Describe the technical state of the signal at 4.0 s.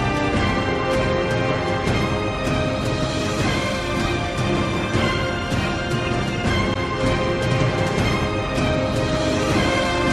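At 4.0 s the signal is intact, with no dropout, distortion, glitch or other audible fault at that point.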